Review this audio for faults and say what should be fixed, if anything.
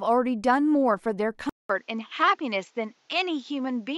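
Input switched to a poorer device at 1.49 s, lasting to the end of the clip. After a silence of 200 ms, the speech loses everything above 7.6 kHz and turns duller, and a faint new background noise appears well below the speech, while loudness stays about the same. This is likely the recorder changing input mid-take to a narrower-band microphone or headset profile. To prevent it, lock the input device before recording and turn off automatic device switching.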